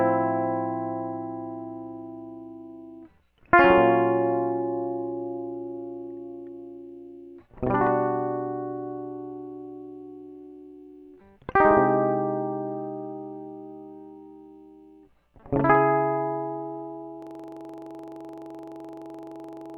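Music, with a system hang loop from 17.22 s to the end. A 42.67 ms slice repeats at 23.4 Hz as a buzzy stutter, which fits a frozen 2048-sample buffer.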